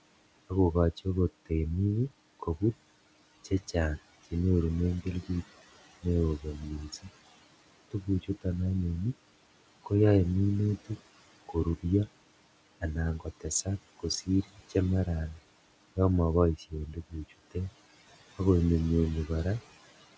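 Speech recording with noise suppressor artifacts throughout: the room noise, sitting about 18 dB under the voice, gets pulled down by about 18 dB between phrases. In three stretches the suppressor also mistakes speech for noise, from 0.49 to 8.46 s, 10.83 to 11.85 s and 12.81 to 19.3 s, dipping it by up to about 20 dB. That leaves soft sounds swallowed for well under a second in each of the first and last stretches and a brief moment in the middle one. The high end stops at 8 kHz, as expected from a G.722 call path.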